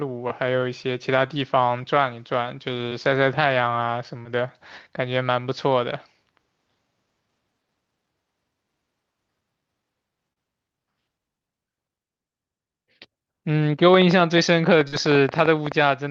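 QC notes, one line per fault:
2.89–2.93, 4.23–4.27, 10.33–10.38 and 14.88–14.94 s: short concealed packet loss. Each is a brief smear or wobble in the speech. About 20, 20, 40 and 40 ms of audio failed to arrive in time, and the decoder bridged each gap by extending the preceding sound before blending back into the real audio.
13.94–15.73 s: train of clicks. About twenty sharp ticks at irregular spacing, averaging 9.6 per second and peaking about 10 dB above the speech, audible in the pauses too. The likely cause is interference from nearby equipment or a faulty connection or power supply injecting pulses.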